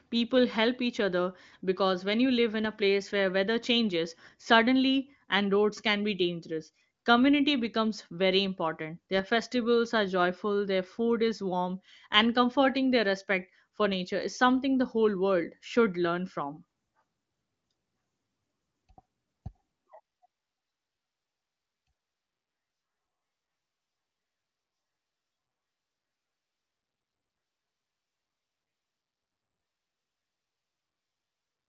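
Nothing technically wrong can be heard in this speech clip. It carries the band-limited sound of the AMR wideband (HD Voice) codec, with no content above about 7.6 kHz and coding damage faint at most, which points to one of the codec's highest rates, around 23.05 kbit/s.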